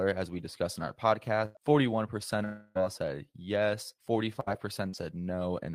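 At 1.45 to 1.57 s, just after "we discussed in our", a burst of packet loss removes about 100 ms. The receiver continues the last sound and fades it out before speech resumes further on.

From 2.45 to 2.77 s, before "all said yes", about 300 ms goes missing, likely a long network dropout. The gap is filled entirely with continued, decaying sound rather than silence.

At 4.89 to 4.95 s, short concealed packet loss drops about 40 ms. Extrapolated audio blends back in as a brief smear.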